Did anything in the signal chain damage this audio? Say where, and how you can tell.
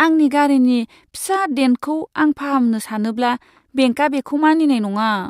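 No, nothing along the chain seems to have left a mark on this speech recording, so there's no stage here to point to.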